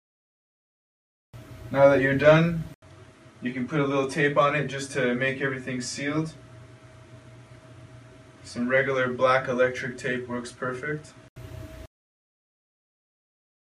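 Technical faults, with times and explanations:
2.74–11.36 s: input switched to a poorer device. A short gap of 80 ms marks the change. The sound then turns duller, with nothing above 11.3 kHz, drops roughly 5 dB and carries faint new background noise. A lesser microphone likely took over until 11.36 s.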